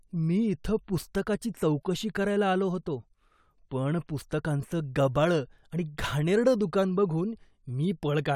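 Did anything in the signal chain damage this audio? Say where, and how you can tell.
No, nothing in the chain audibly damaged this speech.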